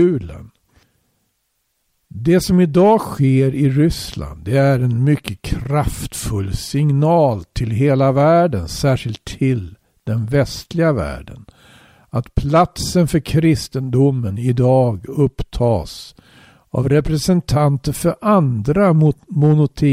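Nothing in the audio stands out as a technical fault; it runs along without any interruption, glitch or sudden change worth pointing to.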